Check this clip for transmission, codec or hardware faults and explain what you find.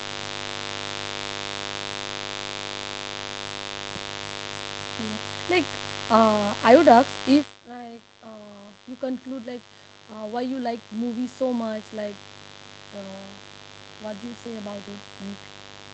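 Two faults are present in this speech clip: a mains buzz running throughout, and an automatic gain rise in the second half.

The mains buzz sits under the whole recording, at roughly 15 dB below the speech. Sharp switching spikes from a dimmer, rectifier or unshielded lead arrive twice per 50 Hz cycle, spreading harmonics up into the kilohertz range and producing a steady, raspy buzz.

Automatic gain rising runs from 7.64 s to 12.27 s, just after "I would ask if". The talker drops back at about 7.5 s, lowering the input by about 21 dB. The gain control then raises its gain by about 8 dB over several seconds, so voice and background swell together.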